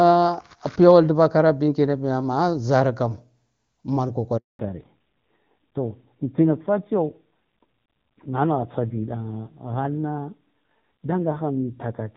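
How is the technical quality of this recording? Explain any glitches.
The recording has two linked problems: a short dropout at 4.37 s, then a lasting loss of bandwidth.

Handover gap, 4.37 to 4.59 s: the sound fades out within a few tens of milliseconds and stays silent for 220 ms. It behaves like a network handover, where no speech frames reach the phone while the call moves between links, so that stretch is lost. A crisp fade into true silence, followed by a different-sounding link, separates it from ordinary packet loss, which tends to leave concealment buzz or repeated fragments.

Fallback to narrowband, 4.59 s to the end: from the moment the signal returns, nothing above 4 kHz is present. Before the gap, the speech had the open, airy top of AMR wideband (HD Voice) at a quality that fits its highest rate, about 23.85 kbit/s. Afterwards it sounds muffled and somewhat rough, which points to AMR narrowband at a low rate, around 7.4 kbit/s. 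The sharp 4 kHz ceiling, holding steady for the rest of the clip, tells this codec switch apart from a gradual drop in bitrate.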